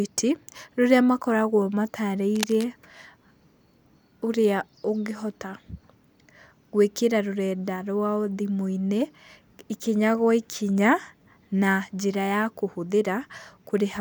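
At 2.36 s a burst of cable scratch noise cuts into the speech. It lasts until 2.67 s, about a third of a second. It sounds like scratching and rustling laid over the voice. The bursts are dense and uneven. They sit roughly 10 dB below the speech. The likely cause is a worn cable, connector or control being moved. Its contact resistance jumps about rapidly, and the signal picks up that crackle.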